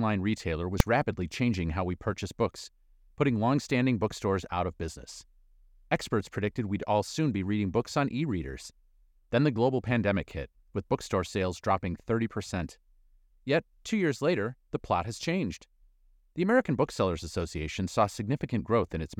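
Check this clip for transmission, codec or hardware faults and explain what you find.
One fault is audible. At 0.80 s, just before "rapidly changing how we", invalid numbers at full scale: a calculation failed and pinned a 2.9 ms block to one extreme value, heard as one sharp bang.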